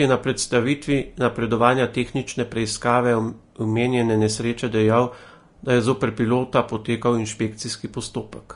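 Throughout the speech, low-bitrate Vorbis compression is the likely culprit: the encoder discards everything above 10.6 kHz and quantises the remaining treble so coarsely that fine detail turns into noise, which fits a rate near 36 kbps. The result sounds plainly hissy and grainy, with blurred consonant attacks.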